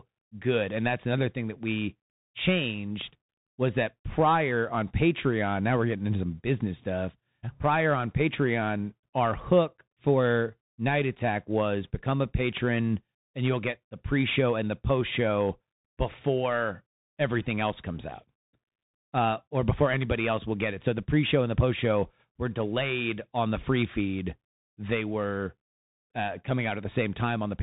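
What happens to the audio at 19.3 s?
At 19.3 s the speech is still passing through the Bluetooth CVSD headset codec, which runs through the whole clip. Each sample is coded as a single up-or-down step, consistent with a 64 kbps CVSD link, so nothing above 4 kHz survives. Sibilants turn scratchy and a granular hiss sits beneath the speech. A plain band limit would sound clean, but this has slope distortion on loud, bright sounds.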